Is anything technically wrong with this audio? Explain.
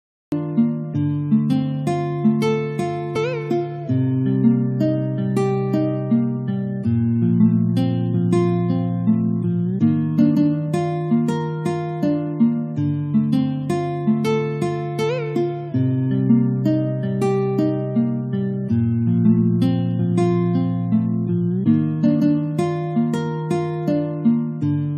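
Yes, there are two faults.

A cut-off start: the recording began late, so the audio opens in digital silence for about the first 0.32 s and then starts abruptly in the middle of a sound at 0.32 s, with no natural attack or fade-in.

Damaged data in a compressed stream at 3.15 s: corrupted bytes in the encoded stream caused the decoder to misread those frames and lose sync while it searched for the next valid frame header. The result is a brief glitch lasting about 16 milliseconds.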